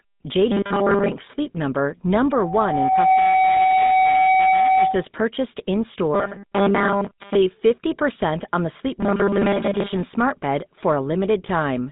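The whole clip passes through the GSM full-rate codec at 13 kbps, which rebuilds the speech from a vocal-tract model driven by a thinned pulse excitation over a band of roughly 150 Hz to 3.7 kHz, so the speech sounds muffled, buzzy and gravelly throughout.

From 0.52 to 1.12 s, the likely cause is audio arriving too slowly, with the player filling gaps by looping a 5 ms slice, so most of the real audio is lost. This puts a rigid, metallic 200 Hz buzz over the speech.

From 2.31 to 5.06 s, a loudspeaker feedback squeal appears: the microphone picks up its own loudspeaker, and the loop runs away at 757 Hz. The tone swells over about a second into a steady whistle about 5 dB above the speech.

The same robotic buzz from repeated short buffers returns from 6.14 to 7.36 s and from 9.00 to 9.93 s, ending just before "smart bed".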